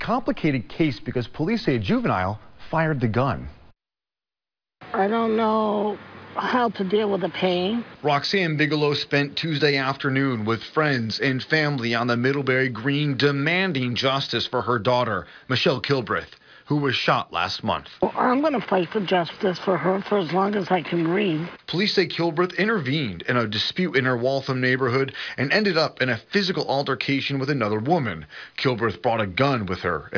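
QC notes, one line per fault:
No faults turned up anywhere in this one, so there's nothing to flag.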